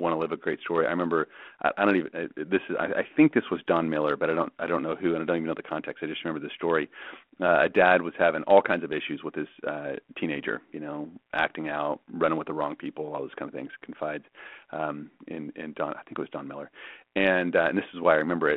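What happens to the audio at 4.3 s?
At 4.3 s the speech comes through intact, carried on the same narrowband telephone-style line as the surrounding audio, with nothing breaking or changing at that point.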